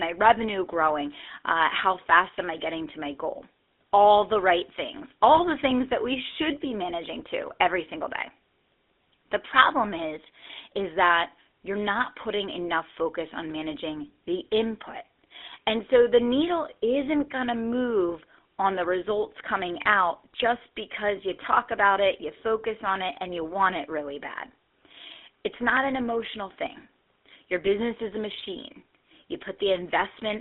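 Buzzy, gravelly roughness runs through the whole speech recording. The sound is boxed into a narrow line band of roughly 250 Hz to 3.6 kHz, so there is neither low body nor top-end air. This is the GSM full-rate codec, which fits a 13 kbps stream. It rebuilds the voice from a vocal-tract model excited by a sparse, regularly spaced pulse train, and that thinned-out excitation is what gives the plainly audible grainy buzz from start to finish.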